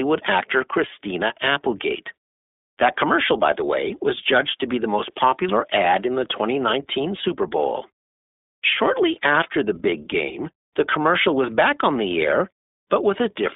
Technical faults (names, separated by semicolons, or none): iLBC codec